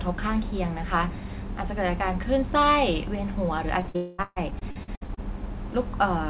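From 3.8 to 5.44 s, repeated packet loss sets in. Packets repeatedly fail to arrive, twelve holes in all, the longest 138 ms, and each is patched by stretching the previous sound. About 29% of that span is filler, heard as choppy speech with pieces missing.

Inside it, from 3.96 to 4.20 s, a fading buzz or hiss runs for 220 ms without falling to silence. The likely cause is a long network dropout: no audio came through for that stretch, and the receiver kept extending the last sound. Everything throughout is narrowband, with nothing above 4 kHz, as the call codec allows.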